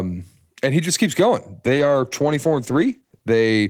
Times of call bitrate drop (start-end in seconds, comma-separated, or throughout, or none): 1.66-3.29